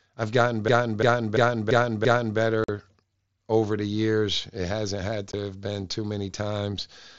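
From 0.68 to 2.39 s, right after "I've gotten", a system hang loop repeats one 341 ms buffer-cycle about five times at 2.9 Hz, a skipping-record repeat consistent with a 16384-sample ring buffer. Unconcealed Bluetooth headset packet loss then cuts abrupt 45 ms holes at 2.64 to 2.69 s, and 15 ms holes at 5.32 s between "hasn't had" and "have been too many", where mSBC frames went missing.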